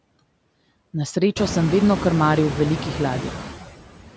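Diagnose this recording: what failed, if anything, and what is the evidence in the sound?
The failure is in the call processing stage, where noise suppressor artifacts run through the whole speech clip. The suppressor pulls down bands it judges to be steady noise, by about 17 dB. Room noise jumps by about 19 dB at around one and a half seconds. After that it sits only about 10 dB under the speech. The suppressor then pumps it down in gaps and lets it back under words. The band-limit near 8 kHz is normal.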